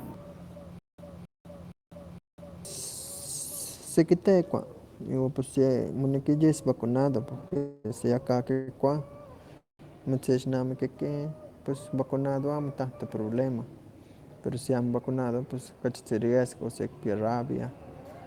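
From 0.79 to 2.65 s, a stutter with silent gaps: the player likely stalled and replayed its last 270 ms fragment four times, each followed by about 200 ms of dead silence.

At 7.41 to 7.92 s, after "yis vacunado" and before "si aka", repeated stalls (stutter): packets ran late, emptying the jitter buffer four times, so 92 ms of continued sound makes the speech drag.

Call audio freezes follow at 7.57, 8.52 and 9.57 s: packets were likely held up, so the receiver stretched the last sound over 275, 151 and 218 ms, and the last one fades into 140 ms of silence.

From 13.98 to 15.83 s, after "amo tanto problema" and before "kachitzi riesgo sikipia rabia", a jitter buffer speed-up trims about a fifth of a second, so speech runs 11% faster and sounds hurried.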